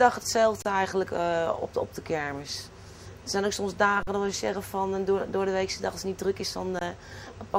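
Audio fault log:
0.62–0.65 s: underrun with held sample. The output buffer ran dry for 28 ms and the converter held its last value, so the sound simply stops. On the waveform this shows as a flat line, and on the spectrogram as a blank vertical strip. Playback resumes softly where it left off.
4.03–4.07 s: underrun with held sample, 43 ms, which fits a 2048-sample buffer at 48 kHz. It shows the same flat segment and gap.
6.79–6.81 s: underrun with held sample, 21 ms, which fits a 1024-sample buffer. It is again flat, and playback continues from the same point.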